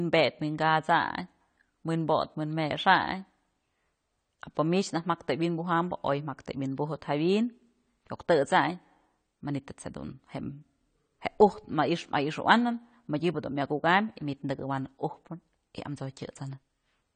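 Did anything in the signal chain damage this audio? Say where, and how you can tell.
Yes, at the codec: likely AAC compression, throughout. Nothing above 9 kHz remains, consistent with about 32 kbps, and coarse quantisation leaves the speech dull and smeared.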